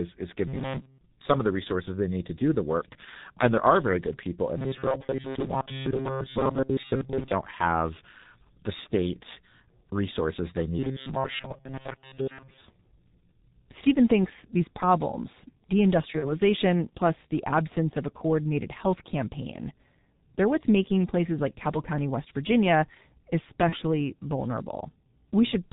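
Throughout, the G.723.1 codec leaves the speech muffled and hoarse. The spectrogram shows nothing above 4 kHz and smeared consonants, consistent with a heavily compressed, roughly 6 kbit/s stream.

From 4.58 to 7.31 s, after "very good people in", and again from 10.79 to 12.61 s, after "the state resources they", the speech turns into a rigid metallic buzz at 133 Hz. This is robotic sound from repeated short buffers. Most of the real audio is skipped while a fragment of about 7.5 ms, likely a starved buffer, is looped. The spectrogram shows evenly spaced harmonic stripes, and the waveform repeats identical cycles.

At 16.19 to 16.38 s, just before "plus the absence of", and at 23.69 to 23.76 s, VoIP packet loss concealed by the speech codec stretches the sound into a buzzy tone or coloured noise that fades, which fits a single lost 30 ms frame. The spectrogram shows a smooth, decaying smear. 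The weakened speech takes a moment to recover.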